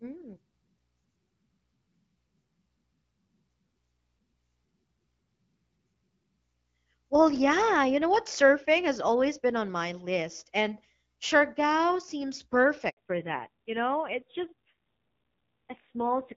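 At 12.89 s the call switches from one network to another and no speech frames arrive for 80 ms, a handover gap. The speech dies away almost instantly and stays silent until 12.97 s, so whatever was said in that stretch is lost.

From 12.97 s to the end, the call falls back to narrowband. The HD Voice link, whose light coding damage fits AMR-WB at around 12.65 kbit/s, gives way to an older codec whose rougher texture points to AMR-NB near 5.9 kbit/s. Nothing above 4 kHz survives, so the speech turns duller and more raspy.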